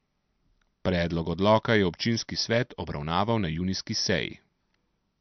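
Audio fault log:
throughout: likely MP3 compression; the speech is cut off at 6.1 kHz and sounds watery as weak frequency lines flicker between frames, which fits roughly 48 kbps.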